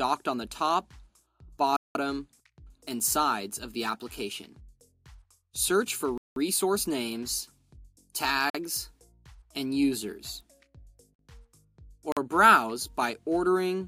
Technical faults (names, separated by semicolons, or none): block of digital silence